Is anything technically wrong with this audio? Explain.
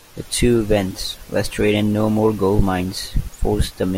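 No, nothing technically wrong turns up anywhere in this speech recording.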